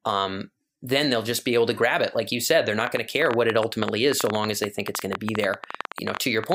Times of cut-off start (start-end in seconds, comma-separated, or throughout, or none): none